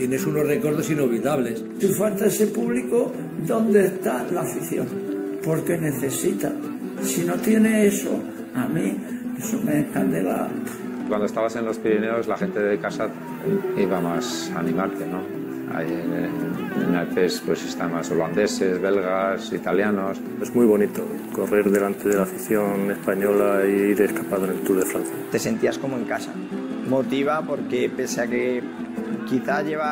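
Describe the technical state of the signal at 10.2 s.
At 10.2 s the signal is intact, with no audible fault at that moment.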